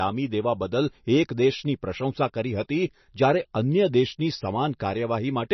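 From start to finish the speech sounds watery and swirly, with sibilants turning into metallic chirps and consonant attacks smeared, and there is nothing above 6 kHz, leaving the top end dull. The likely cause is heavy MP3 compression at a bitrate near 28 kbps. Starved of bits, the encoder cut the treble at a fixed frequency and dropped weak frequency lines that flicker on and off between frames.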